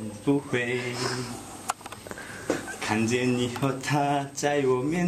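No dropouts, glitches, distortion or level problems turn up anywhere in the audio.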